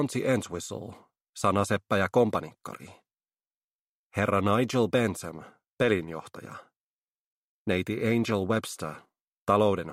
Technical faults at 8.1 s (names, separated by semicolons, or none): none